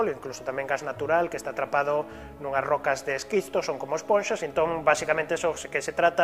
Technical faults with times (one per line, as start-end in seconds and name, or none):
none